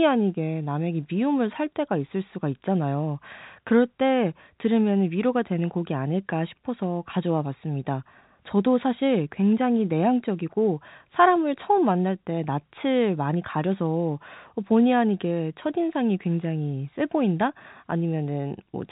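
No technical faults are audible in this recording.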